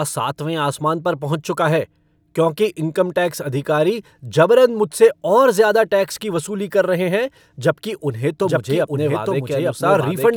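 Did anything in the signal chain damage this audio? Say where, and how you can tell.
Yes. From 8.43 s to the end, a doubled audio track appears. A second full-band copy of the speech runs about a second behind, at roughly equal level, with no decay or room colour. It starts abruptly. This likely comes from an editing step that left two copies out of step, or from the audio being captured a second time by a slower path.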